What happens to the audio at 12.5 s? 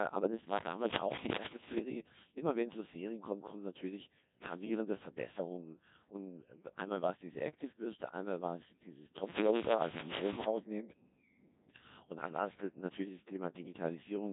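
At 12.5 s the speech is still under the Codec 2 vocoder that runs through the whole clip. The decoder rebuilds the voice from sine waves using only pitch, voicing, energy and a spectral envelope, so the sound is robotic and buzzy, with the heavy damage of a rate near 1.6 kbit/s. A spectrogram shows neat synthetic harmonics with nothing above 3.8 kHz, and the waveform does not match the original.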